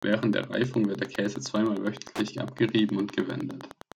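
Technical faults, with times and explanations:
Throughout, Wi-Fi interference: a steady, faint ticking runs under the speech at about ten clicks per second, sitting around 20 dB below the voice. The ticks arrive every 102.4 ms, matching the beacon interval of a nearby Wi-Fi radio. Its bursts of radio energy are picked up by the audio circuitry and rectified by a nonlinear stage, turning each transmission into a short audible click.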